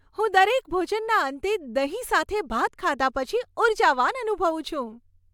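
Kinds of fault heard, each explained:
No faults are audible anywhere in this speech clip.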